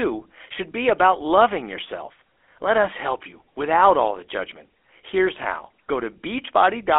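Throughout, the speech shows plainly audible GSM full-rate codec damage: a 300 Hz to 3.4 kHz band with a buzzy, gravelly roughness that clean telephone filtering lacks.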